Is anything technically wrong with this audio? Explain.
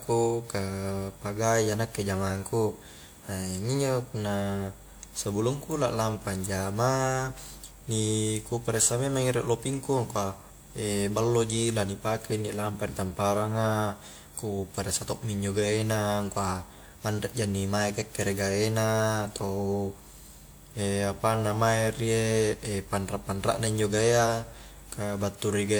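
Yes. Generation loss runs through the whole speech clip. The smeared, hollow, swirling texture goes beyond what one pass at around 96 kbit/s would leave, and it is likely the result of roughly four rounds of re-encoding, with a character that fits WMA 1. Each pass quantises on a shifted frame grid, so noise accumulates and attacks blur. A spectrogram shows nothing above 20.1 kHz, and the waveform's onsets look softened.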